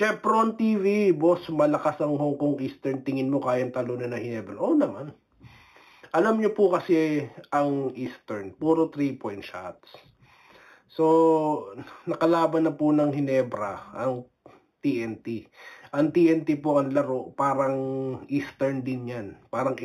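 Imaging from linear upsampling runs throughout. The rate was raised by straight-line interpolation, which points to an 8 kHz source brought up to 44.1 kHz. That weak filter dulls the top of the band and leaves a mirrored copy between 4 kHz and 8 kHz, around 35 dB below the signal, heard as metallic shimmer on high content.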